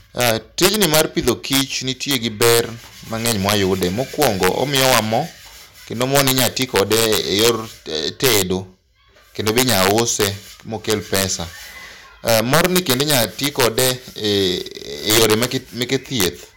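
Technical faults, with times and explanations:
Throughout, integer overflow: the speech is driven about 7 dB past the integer limit, and instead of being held at full scale the loudest peaks wrap around to the opposite extreme. Only a small share of samples, roughly half a percent, goes over, so the faults land as sudden violent cracks on the strongest syllables. Ordinary clipping would flatten those peaks into a buzzy distortion; here each overshoot jumps across the whole range, giving a far sharper snap.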